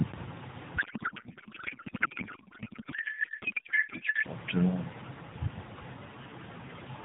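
From 0.78 s to 4.26 s a codec payload misread replaces the speech with garbled noise and warble that barely tracks it. The receiver reads octet-aligned AMR as bandwidth-efficient, so every field is shifted. Unlike dropouts or low-bitrate buzz, the damage is continuous and stops abruptly once framing agrees.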